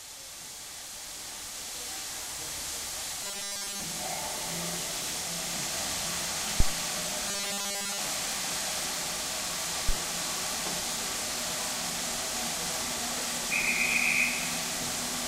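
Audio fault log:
3.24 to 3.85 s, robotic sound from repeated short buffers: a rigid metallic buzz at 200 Hz replaces most of the sound, likely from one 5 ms stretch repeated while new audio was late.
6.60 to 6.76 s, phantom power thump: a low thump dying away in about 36 ms, caused by a supply switching on a live input and the step passing through coupling capacitors.
7.28 to 7.98 s, robotic sound from repeated short buffers: the same 200 Hz metallic buzz, now covering all of the sound, likely from a 5 ms buffer looped in place of missing audio.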